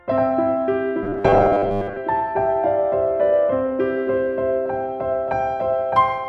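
From 1.03 to 1.98 s the sound turns into a rigid, metallic buzz pitched at 100 Hz. This is robotic sound from repeated short buffers, likely caused by starved playback looping a 10 ms slice over most of that stretch. From 3.34 s to the end, the sound becomes thin, bright and hissy because pre-emphasis was left on: a 50 µs FM-style treble boost, about 11 dB at 10 kHz, was never undone.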